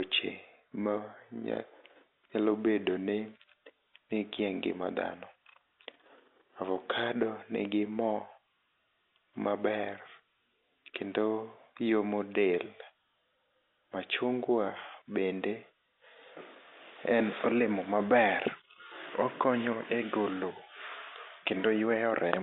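A speech recording carried over a telephone line, and nothing is technically wrong with it.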